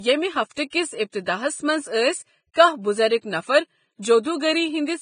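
From start to finish the speech is band-limited, with nothing above 9.7 kHz, and the upper range is hissy and grainy, with roughened tones and smeared consonant onsets. The likely cause is heavy Vorbis compression, consistent with a bitrate around 20 kbps, where coarsely quantised treble detail is replaced by noise of similar energy.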